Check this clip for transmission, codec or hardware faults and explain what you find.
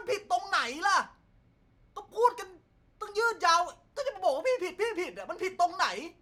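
No faults detected.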